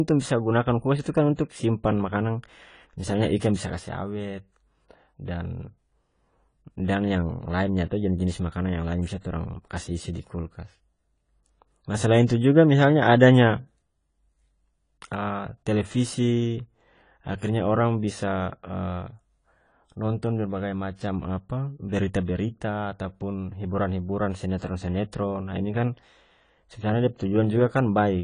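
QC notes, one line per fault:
Throughout, AAC compression: the speech sounds dull and smeared, with nothing above 10 kHz, and the sibilants and held vowels pick up a fizzy, warbling edge that's easy to hear. That's likely an AAC-LC encode starved of bits. The encoder pulled its cut-off down and coarsely quantised or patched over whole bands to stay in budget, which is what gives that watery texture. The damage fits a low rate around 24 kbps.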